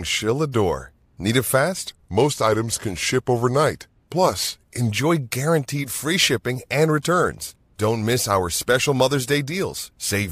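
From 1.89 s to 4.91 s the speech drops about 1.5 semitones and slows to 0.919 times normal speed, a wrong sample rate fault. The samples are clocked out too slowly without conversion, which fits 48 kHz material played at 44.1 kHz.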